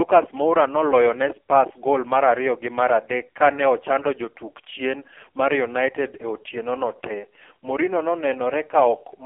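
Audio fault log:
throughout, AMR narrowband mobile codec: heavy codec damage leaves the speech buzzy and synthetic, which points to a very low bitrate, near 5 kbps, on a 300 Hz to 3.4 kHz line with nothing above 3.5 kHz. Plain band-limiting would narrow the sound without this coarse, modelled timbre.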